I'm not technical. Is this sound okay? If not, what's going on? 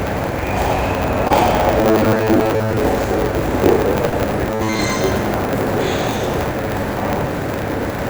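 No. A steady 100 Hz buzz runs through the whole clip, and the audio plays about 1.09 times too fast while keeping roughly its normal pitch. This is a block size mismatch (truncated): one stage hands over longer chunks than the next reads, so each chunk's end is dropped.

There are two short concealed packet losses, where pieces of audio arrived too late and the receiver filled the gaps by continuing the preceding sound. At 1.28 s about 20 ms is missing, heard as a brief smear. Between 4.09 and 4.14 s about 40 ms is missing and 32 ms was patched, so the wobble is slightly longer.

Two stretches have robotic sound from repeated short buffers, a rigid metallic 100 Hz buzz. From 1.81 to 2.77 s most of the sound is repeated rather than new, and from 4.50 to 4.79 s all of it is. The likely cause is new audio arriving too seldom, so the software keeps replaying the last 10 ms.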